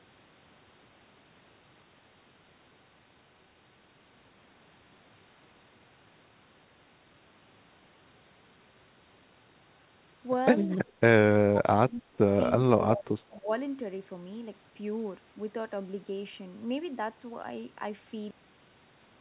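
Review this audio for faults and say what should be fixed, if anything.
The speech dips and breaks up in four places: 10.76 to 11.0 s, 11.47 to 12.18 s, 12.71 to 13.09 s and 13.39 to 13.51 s. It falls by up to about 30 dB in the second stretch and by roughly 10 to 20 dB in the others. This is speech suppressed in double talk, likely caused by the echo canceller attenuating this talker while the far side was also speaking, because it could not separate the two. Tuning the canceller's double-talk detection to favour the near talker would prevent it.

From 13.31 to 13.39 s a faint, delayed copy of the voice comes through, lagging by 277 ms and sitting about 30 dB below the speech. This is an echo leak, likely residual loudspeaker sound that the far end's echo canceller failed to remove and sent back down the line. It lands right at the edge of the double-talk gap. Using a headset or giving the far end's canceller more suppression headroom would prevent it.

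At 18.31 s the audio stops dead mid-sound and drops straight to digital silence with no decay. That is a cut-off end: the final buffers were never written out. Flushing and closing the recorder only after the last audio has drained would prevent it.

The call path itself passes nothing above 4 kHz, which fits a 64 kbps G.711 A-law codec.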